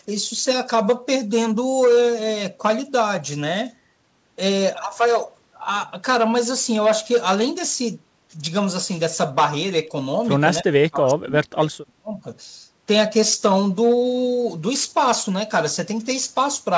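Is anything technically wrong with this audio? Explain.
Yes. Between 10.63 and 12.25 s the speech dips sharply, losing around 35 dB at its deepest, with roughly a second and a half affected in total. This is speech suppressed in double talk, likely caused by the far end talking at the same moment. Unable to separate the local talker from the loudspeaker echo, the echo canceller turned both down. The band stops at 8 kHz throughout, consistent with a wideband call codec such as G.722.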